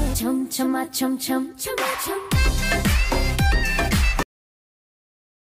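At 4.23 s the audio ends abruptly in a cut-off end: the sound is truncated mid-event rather than fading or decaying naturally. The final buffers of the signal were never written to the file or sent to playback, so the waveform jumps straight from active content to digital silence. That silence fills the remaining 1.3 s or so of the clip, with no tail, reverb or release to soften the transition.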